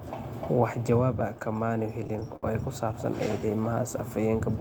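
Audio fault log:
1.39 to 2.45 s, repeated stalls (stutter): Right after "jawaab ah" the playback stalls ten times in about a second. In each stall the receiver holds the last sound for a moment, with the longest hold at about 65 ms, and together these fill around 152 ms, roughly 14 percent of that stretch. Nothing is lost, so the sound drags and hiccups instead of skipping. The cause is packets arriving late or slower than playout, which emptied the jitter buffer again and again.
3.39 to 4.10 s, jitter buffer slow-down: The receiver stretches this passage by about 87 ms, so it plays at around 89 percent speed while the pitch stays the same. Sounds come out drawn out, because the stretch is made by repeating single pitch periods and small slices of pauses many times in a row. The buffer was low or had just raised its target delay, and the repeats rebuild its reserve.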